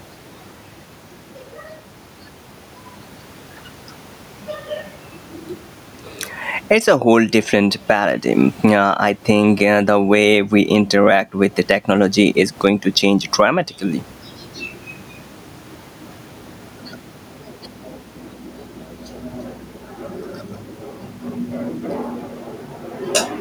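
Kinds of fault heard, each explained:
Gain pumping: throughout the speech, the gain swings by roughly 15 dB, and the room noise sits about 43 dB below the speech. Loud and quiet syllables land closer in level and the delivery sounds squashed. The likely cause is input gain set far too high, with a fast limiter or compressor clamping down on each loud sound.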